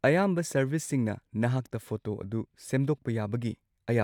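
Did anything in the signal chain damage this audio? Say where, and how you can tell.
No, there is no sign of damage from any stage of the signal chain in this speech recording. Nothing heard points to a problem in wiring, conversion, processing, transmission, storage or playback.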